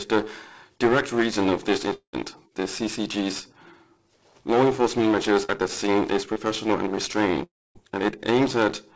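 At 1.94 to 2.15 s there's a long network dropout, likely: about 0.2 s never arrives, the last sound is stretched into a fading buzz or hiss, then about 0.1 s of near-silence. Short concealed packet losses follow at 5.45 to 5.64 s and 6.33 to 6.38 s. Roughly 40 ms and 20 ms went missing, patched by continuing the previous sound, so you hear brief smears. At 7.44 to 7.77 s there's a second long dropout, likely, of about 0.32 s, with the last sound continued as a fading fill, then about 0.26 s of silence. The audio throughout has nothing above 8 kHz, which fits a G.722 call path at 64 kbps.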